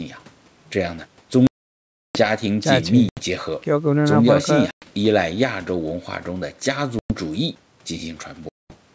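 Packet loss on an ADPCM call drops stretches of this speech to silence, and the decoder's predictor then restarts out of step with the sender. Hard-edged gaps fall at 1.47–2.20 s (680 ms), 3.09–3.20 s, 4.71–4.85 s, 6.99–7.13 s and 8.49–8.75 s. Each is followed by slightly distorted speech that settles within some tens of milliseconds. The wideband G.722 band extends to about 8 kHz.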